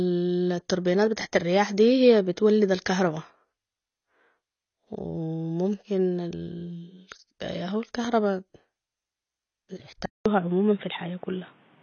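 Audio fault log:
Throughout: AAC compression, likely at a low bitrate near 24 kbps; nothing above 6.6 kHz survives, leaving speech dull and smeared, with audible warbling artefacts.
10.06–11.82 s: input switched to a poorer device, likely. After a 200 ms silence the band stops at 3.8 kHz, sounding boxy, with new background noise about 35 dB down and loudness roughly unchanged.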